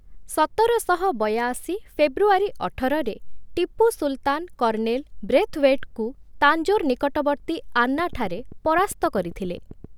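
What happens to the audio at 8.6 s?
Steady ticking runs over the speech, roughly fifteen clicks at an even 7.6 per second and about as loud as the speech itself. This train of clicks lasts from 7.99 to 9.85 s, starting just after "ବ୍ରେଥୱେଟଙ୍କୁ ତାଞ୍ଜୋର ନିକଟବର୍ତ୍ତୀ", likely from interference injecting repeated pulses.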